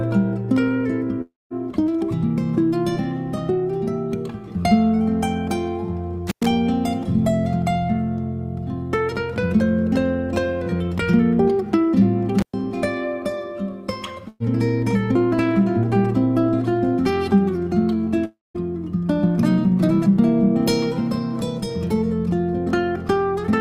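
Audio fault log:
1.21–1.53 s and 18.25–18.57 s, long network dropout: A likely stall in arriving audio leaves about 0.3 s never played. The receiver carries the last sound on as a fading buzz or hiss for roughly 0.29 s, leaving near silence for the final stretch before the audio resumes further on.
6.27–6.46 s and 12.39–12.54 s, intermittent contact: A loose connection opens briefly, for 104 ms and then 114 ms. The sound cuts out with crackle at each edge, and faint hiss remains while the line is open.
14.28–14.43 s, burst of packet loss: About 120 ms of consecutive packets are lost or arrive too late. The receiver fills roughly 115 ms by extending and turning down the last sound, so it fades as a held buzz or hiss before jumping ahead to the audio that follows.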